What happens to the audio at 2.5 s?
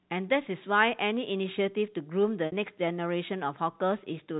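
Packet loss with pitch repetition from 2.46 to 2.52 s: 60 ms went missing and the last pitch period was looped, giving a brief buzzy, fading hold.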